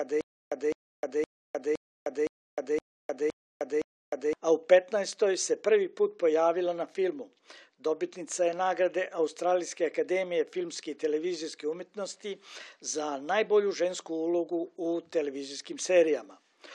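From the first moment until 4.33 s, there is a stutter with silent gaps, already under way as the clip opens. A 208 ms burst plays, followed by 307 ms of dead digital silence. The cycle repeats every 515 ms, eight times. Each burst is the same fragment. The likely cause is a stalled player or stream replaying its last piece at each retry, then running empty. The audio meant for that span is lost.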